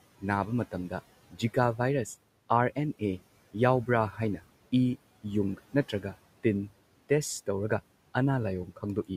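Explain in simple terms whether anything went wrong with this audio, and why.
Right after "ꯅꯥꯕ ꯃꯇꯝꯗ", between 1.31 and 1.56 s, the noise suppressor cut some speech, treating soft sounds as background and turning them down for about a tenth of a second. Unlike a dropout, nothing goes silent. The speech just sounds swallowed and faint.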